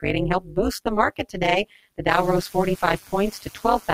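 Overlap-add ripple runs through the whole clip. The speech was split into windowed frames and rejoined with an overlap whose gains do not sum evenly, so the level swings by about 60 dB once per frame, around 200 times a second. The result is a metallic buzz with extra tones around each note.

From 0.41 to 0.57 s, the noise suppressor cuts the speech. It mistakes part of the speech for background and pulls it down by up to about 9 dB for roughly a tenth of a second, leaving that stretch swallowed and faint.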